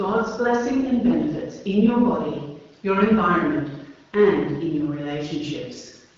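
Nothing goes wrong anywhere in this bit of speech, which comes through an AMR wideband (HD Voice) link at 12.65 kbit/s, so the top end simply stops at 7.4 kHz, just where that codec's band limit puts it.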